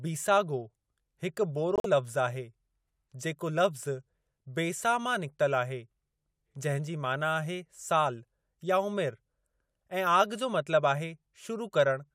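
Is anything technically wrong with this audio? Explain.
Yes. A corrupt frame is muted from 1.76 s to 1.86 s in this speech clip. Bits inside compressed frames were damaged, the decoder rejected them, and the player filled their slot with silence instead of decoded audio. The result is a sudden hole of about 0.1 s that starts and stops abruptly, which fits several consecutive codec frames of roughly 20 ms each being discarded. The speech then resumes on schedule, with no shift in timing.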